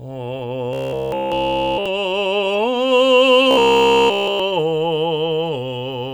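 From 0.73 to 1.86 s and 3.51 to 4.40 s, the music turns into robotic sound, likely from repeated short buffers: a rigid 66.7 Hz buzz with no silent gaps, unlike dropouts.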